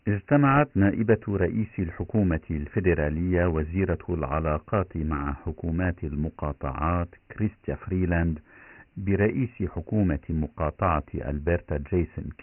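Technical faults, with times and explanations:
Throughout: Dialogic VOX ADPCM. Nothing sounds above 3 kHz, fitting 6,000 samples a second. Coarse 4-bit steps leave heavy gritty hiss tracking the speech.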